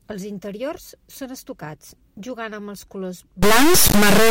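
From 3.42 s to the end of the speech, the audio turns into an integer read as float fault. The sample data was written as whole numbers but decoded as floating-point values. That pattern fits 32-bit integers misread as 32-bit floats. Each sample becomes a tiny number, an invalid one, or something far past full scale. The output slams between silence and the clipping limit. It sounds like a harsh, very loud square-wave buzz that drops out where the speech goes quiet.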